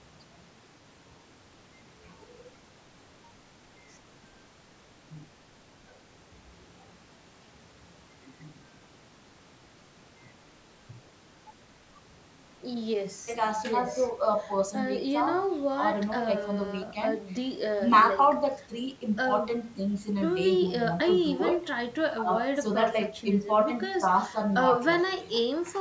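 No technical faults are audible.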